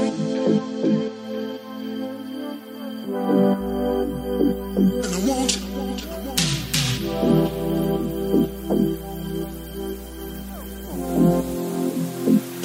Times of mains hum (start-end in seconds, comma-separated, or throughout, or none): 3.58-11.58